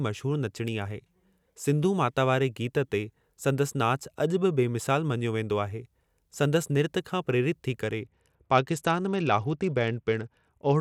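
At 8.03 s the speech shifts abruptly into a Bluetooth SBC bit pool drop that lasts to the end of the clip. The sound points to the encoder falling from a bit pool near 28 to around 10, roughly 84 kbps, as a congested link forces a cheaper stream. With so few bits, the upper sub-bands receive little or nothing and the lower ones are coarsely quantised, so the treble turns dull while a gritty, granular noise rides along with the voice.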